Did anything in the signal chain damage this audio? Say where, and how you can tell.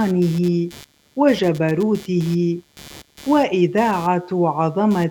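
Yes. Computer activity noise entered in the analogue wiring: processor, graphics or mouse load shifts the shared ground under the audio circuit. The result is a buzzing chirp at around 150 pulses a second, roughly 25 dB below the signal, running throughout regardless of the sound.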